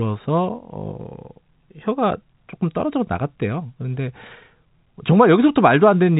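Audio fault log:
No faults heard in this speech.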